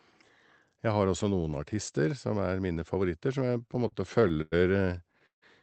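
Speech heard over a call path, band-limited at about 8 kHz, with two distinct stalling faults. Right after "som er mine favoritter", from 3.39 to 4.54 s, repeated stalls (stutter) break the flow: the jitter buffer ran dry again and again, a dozen short holds totalling about 243 ms, the longest about 100 ms, covering around a fifth of that stretch with stretched-out sound. The speech drags and hiccups but nothing is lost. From 5.26 to 5.44 s a single call audio freeze differs by being one longer hold of about 160 ms. The last sound is carried on briefly and then fades into roughly 130 ms of near silence before the speech resumes where it left off. The likely cause is packets held up in transit, which added a delay rather than dropping any audio.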